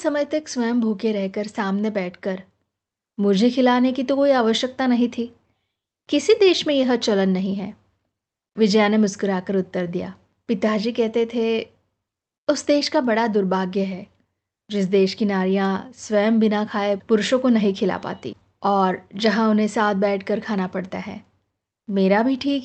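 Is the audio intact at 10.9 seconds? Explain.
Yes, the speech at 10.9 seconds is intact, with no dropout, glitch or other fault at that point.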